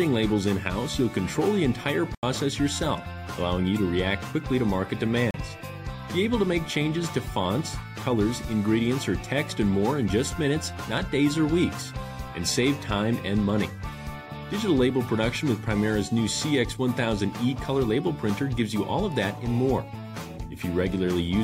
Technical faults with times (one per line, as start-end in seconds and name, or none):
2.15-2.23 block of digital silence
5.31-5.34 block of digital silence